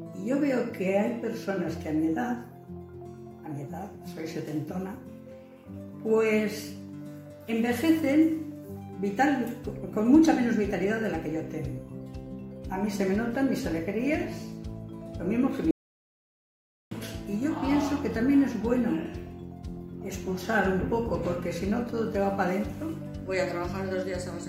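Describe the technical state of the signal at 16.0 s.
At 16.0 s the signal is in an audio dropout to silence. It runs from 15.71 s to 16.91 s, about 1.2 s in all. The sound cuts off abruptly and returns just as abruptly. The gap is silent, with no room tone or hiss beneath it. This is likely a lost input, such as a disconnected device or a brief mute, while recording carried on writing zeros. Whatever occurred in that span is gone.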